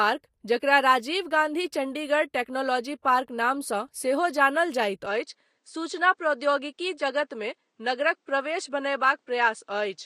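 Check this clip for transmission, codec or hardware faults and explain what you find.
There's one problem here, and it takes up the whole second half of the clip. From 5.06 s to the end, the speech suddenly loses its top end: nothing gets through above 9.4 kHz, so it sounds duller and a bit boxier. A faint new noise floor also appears, roughly 50 dB under the speech. There's no gap and no real level jump at the change. That pattern most likely means the input switched to a poorer device partway through, one with a narrower band and its own tone and background noise.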